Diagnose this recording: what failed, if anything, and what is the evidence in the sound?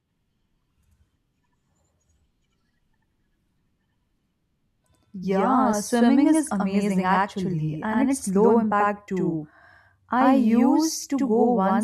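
A buffer-stage fault: channel delay (doubling) runs throughout. Every syllable of the speech repeats once, about 85 ms later and equally loud, which fits one channel lagging by a 4096-sample buffer before mono summing. Room echo would decay and repeat; this single, full-level slap doesn't.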